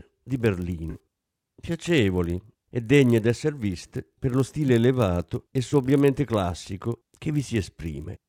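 Speech runs through a filter restarted on every block. Each block starts from silence with a small transient. The result is a steady 50 Hz buzz that tracks the speech level. That rate points to 20 ms blocks. There are also three corrupt frames, in two stretches, concealed by the decoder. From 0.90 to 0.96 s the decoder covers the damaged audio, a length that fits about two frames. After "elevato e", 5.70 to 5.73 s is covered briefly, about one frame.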